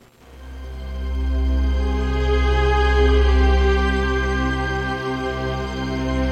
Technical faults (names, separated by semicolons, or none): none